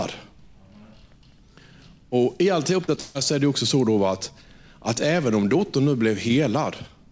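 At 2.84 to 2.90 s and again at 2.96 to 2.99 s there is short concealed packet loss. About 40 ms and then 20 ms of speech never arrived, and the decoder extrapolated the last sound to cover each hole. Each one is a brief smear or wobble. On a spectrogram the harmonics go blurred and flat for a moment, and the waveform repeats itself.

From 3.01 to 3.17 s comes a burst of packet loss. About 140 ms of consecutive audio is missing. The receiver stretches the preceding sound and fades it down, so the speech jumps ahead when it resumes with "så är det också". A spectrogram shows frozen, decaying bands with a clean cut back to real speech. The waveform shows a repeated pattern shrinking in amplitude. The call codec band-limits the audio, so nothing appears above 8 kHz.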